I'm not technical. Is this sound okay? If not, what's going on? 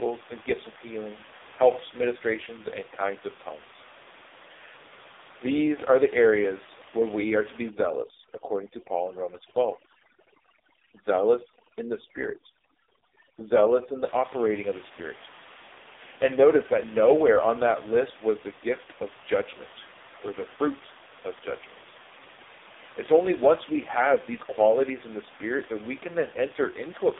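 No. The speech went through the AMR narrowband mobile codec, the squeezing system older mobile phone networks use, set to a very low data rate, so the damage is heavy for the whole clip. It rebuilds the voice from a rough model instead of sending it faithfully, and it passes nothing above about 3.7 kHz, so the voice sounds muffled, buzzy and synthetic throughout. The quiet room noise underneath is part of the recording, not this fault.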